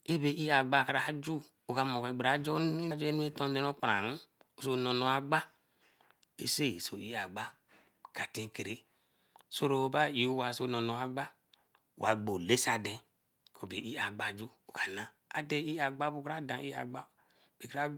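Speech recording, with no technical faults found at any point.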